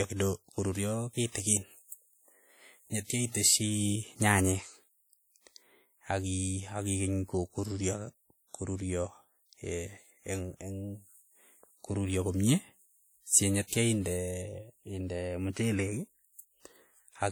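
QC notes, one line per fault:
throughout: low-bitrate audio saved at a high bitrate. The speech carries the artefacts of a heavy, low-rate encode, closer to a 48 kbit/s WMA, even though this MP3 is high-rate with content up to 20.1 kHz. Likely a re-save that couldn't restore what was already lost.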